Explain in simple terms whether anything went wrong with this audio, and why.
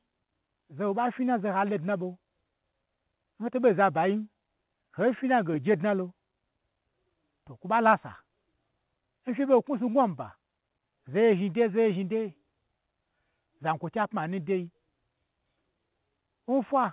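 Nothing went wrong here: the speech has the narrow, phone-line sound of an ordinary call codec, with nothing above 4 kHz, which is how that kind of call link normally sounds and not a defect.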